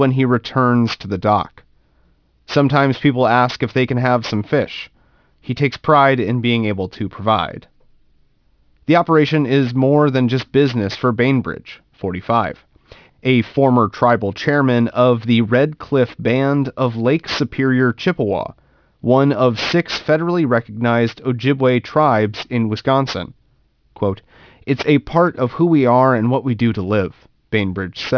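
Aliasing runs through the whole speech clip. The sample rate was cut without a low-pass filter beforehand, and the result fits a drop from 44.1 kHz to 11 kHz, so everything above 5.5 kHz folds back below that edge onto unrelated frequencies. Sibilants come out gritty and metallic, with folded energy around 20 dB under the speech. A spectrogram shows energy packed hard against 5.5 kHz and mirrored fricative streaks moving the wrong way.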